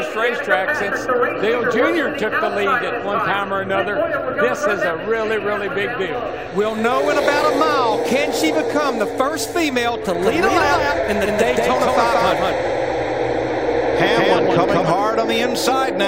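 A second capture path or an out-of-step edit has likely laid the audio in twice: from 10.15 s to 14.91 s a doubled audio track, about as loud as the original, trails it by roughly a fifth of a second, with no room colour, starting and stopping abruptly.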